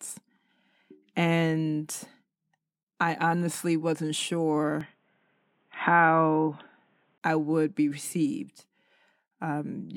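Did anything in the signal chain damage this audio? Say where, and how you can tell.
Yes. The input likely switched to a poorer device between 4.81 and 7.18 s: the speech abruptly loses everything above 3.8 kHz, turns boxy, shifts level by about 5 dB, and gains faint new background noise.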